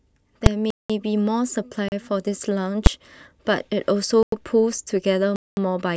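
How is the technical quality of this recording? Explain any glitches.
The recording has two kinds of processing glitch that break up the speech six times.

Invalid numbers at full scale occur at 0.46 s and 2.86 s. A calculation produced infinite or invalid values, which were pushed to the largest sample value for a whole block: 4 ms the first time and 8 ms the second, which fits 64-sample and 128-sample blocks. Because the blocks are so short, each one is heard as a single loud bang.

Blocks of digital silence occur from 0.70 to 0.90 s (192 ms), 1.88 to 1.92 s (about 36 ms), 4.23 to 4.32 s (95 ms) and 5.36 to 5.57 s (211 ms). A block of zeros was played in place of the audio, so the audio drops out abruptly and returns with no fade, leaving holes of varying length.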